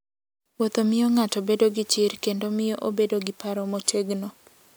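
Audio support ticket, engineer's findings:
No faults found in playback.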